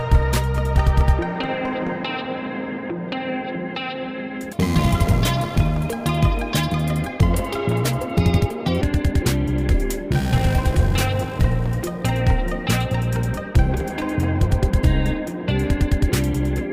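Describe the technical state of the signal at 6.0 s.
At 6.0 s the audio sits inside a section at the wrong speed, running from 4.53 to 8.82 s. It plays 1.32 times too fast. Pitch rises with it, by about five semitones. Everything sounds high and hurried. The likely cause is playback against the wrong clock.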